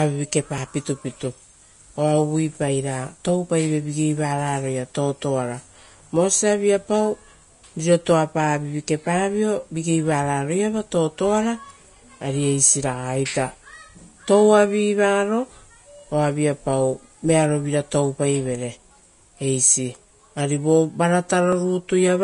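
Throughout the speech there is a hissy, grainy treble with blurred consonant attacks. This is likely Vorbis compression at a rate that fits about 32 kbps. At 0.58 s and again at 21.53 s, there is a small jump in the sound, likely a dropped buffer (overrun) that lost roughly ten milliseconds.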